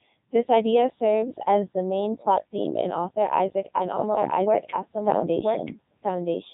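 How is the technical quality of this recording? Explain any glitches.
Quality is poor. Throughout, the speech carries Codec 2 vocoder damage: it is rebuilt from sine waves using only pitch, voicing and envelope, giving a heavy robotic buzz, nothing above 3.8 kHz, and a sound that fits its 3.2 kbit/s mode. Unlike simple band-limiting, it is synthetic, not merely muffled.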